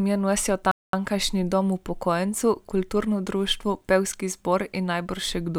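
At 0.71 s the speech halts abruptly and falls silent for about 220 ms, resuming at 0.93 s: a playback stall, most likely the player starving for data or its thread being blocked. On a waveform and spectrogram this shows as a clean, flat, near-silent gap cutting mid-flow.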